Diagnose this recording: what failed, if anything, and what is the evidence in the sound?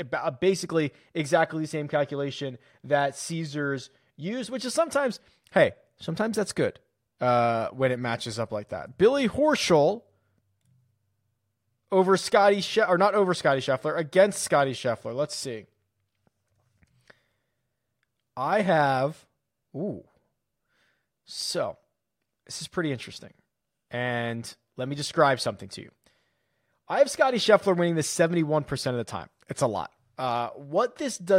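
Nothing stood out on listening to this speech recording that would point to a failure at any stage of the chain.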